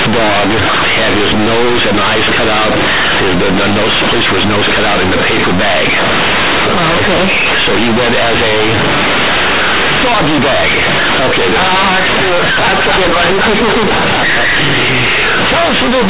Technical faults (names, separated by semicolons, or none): companded audio read as linear